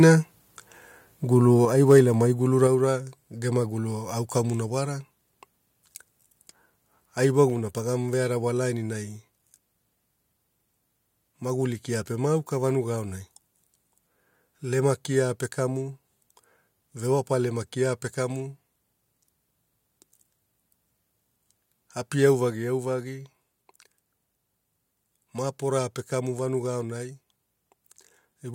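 Microphone volume stepped down at 1.65 s, 2.67 s, 7.5 s and 22.5 s: the speech and its background fall together in sudden steps of about 5 dB, 4 dB, 3 dB and 3 dB, just before "ai wailamai", "ra gema" and "pa vearawa" for the first three. Each drop is likely the call software lowering the microphone's input volume in one move after judging the signal too hot, leaving the level lower afterward.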